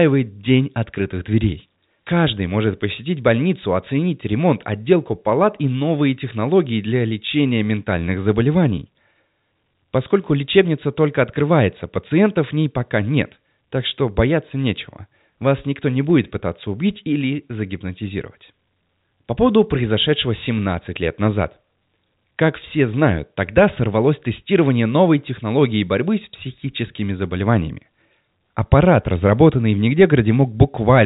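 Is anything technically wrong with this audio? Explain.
No, no technical faults heard.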